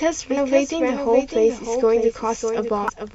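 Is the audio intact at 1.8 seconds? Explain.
No. At 1.8 s, as throughout the clip, a doubled audio track is present: a second, full-band copy of the speech trails the original by roughly 0.7 s at about 5 dB lower, likely from a second capture path or two copies left out of step. It sounds like a dry, clean echo with no decay or room colour. On a spectrogram the same patterns recur, fainter and shifted right by about 0.7 s, and the waveform shows a scaled duplicate overlapping the original.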